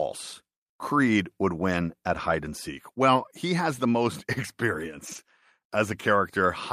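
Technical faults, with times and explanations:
3.15–3.21 s, lost packet rebuilt from error correction: about 40 ms turns briefly rough and grainy without a gap, consistent with two lost packets replaced by the following packets' low-bitrate backup copies.
5.07–5.17 s, lost packet rebuilt from error correction: a slightly longer rough, noisy patch of about 60 ms, fitting three lost packets filled in from lower-quality redundant copies.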